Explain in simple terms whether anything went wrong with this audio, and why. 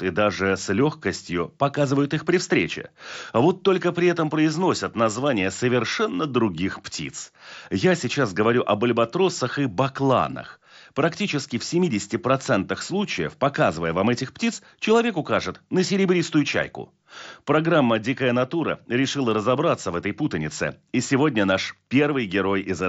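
Nothing went wrong with this speech recording. It came through a Bluetooth headset using the mSBC codec, which carries speech up to about 8 kHz, so it sounds a little less crisp than a studio recording, with a faint graininess on louder sounds.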